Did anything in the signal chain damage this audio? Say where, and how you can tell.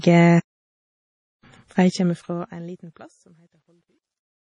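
Yes. Two stages left marks on this speech clip.

The first is the codec, through the whole clip. The speech sounds watery and swirly, and nothing is present above 10.5 kHz. That hard treble ceiling and the shifting texture point to heavy MP3 compression, likely at a low bitrate near 32 kbps. With so few bits, the encoder drops weak frequency lines. Those lines switch on and off from frame to frame, and the top band is cut at a fixed point.

The second is a gain stage, with truncation distortion on a fade. The fade starts at 1.8 s and runs to the end. As the level falls, the sound turns gritty. It is worst from 3.06 s to 4.5 s. The roughness fits a fade computed at about 12 bits with no dither. Near the smallest step, the waveform collapses into a few square levels, so the quiet tail becomes distortion.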